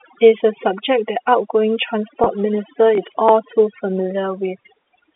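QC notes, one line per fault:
Throughout, overdone noise removal: A noise suppressor set far too aggressively is treating the low-level edges of the speech as noise. It pulls individual frequency bands down hard or shuts them off whenever they sit near its noise estimate, so the gaps between phrases collapse to near silence with twinkling specks. The weaker parts of the voice are stripped away with the noise.
0.38–0.40 s and 2.24–2.26 s, packet loss with pitch repetition: At each of these points about 20 ms of audio went missing, which fits a single lost packet. The receiver covered the hole by replaying the last pitch period of the voice and tapering it. Because the gap is so short, the repetition never fades into silence. Each one is heard as a brief, slightly held buzzy tone before normal speech picks up again.
2.95–3.29 s, processor overload crackle: For roughly a third of a second the processor fell behind and missed audio buffer deadlines again and again, perhaps seven or so, which fits a buffer of only a few milliseconds. 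Each missed buffer was skipped outright, cutting a tiny hard-edged gap into the speech. Packed this close together, the skips merge into a gritty crackling tear over the voice that stops once the load eases. The narrow telephone band of the G.711 line can be heard underneath it.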